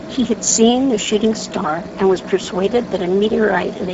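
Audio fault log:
Throughout: Speex codec. The speech sounds plainly coded, grainy and hoarse, with nothing above 7.6 kHz and a thin, hissy upper band instead of crisp detail. Speex is a CELP speech codec, and the degree of damage fits a low-to-middle bitrate near 10 kbps. At that rate, too few bits go to the excitation signal, so the fine voice structure turns noisy, and the band above 4 kHz carries only shaped, noise-like fill.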